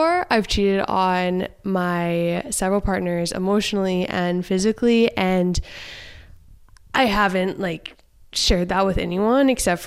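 Speech carries two bursts of DAB burbling, from 2.37 to 2.52 s and from 4.45 to 4.61 s. Weak reception let a low rate of bit errors, a fraction of a percent, slip past error correction into the MP2 data, so corrupted samples put short blips of noise into individual sub-bands. Unlike a dropout's silence, the speech keeps running under the burbling.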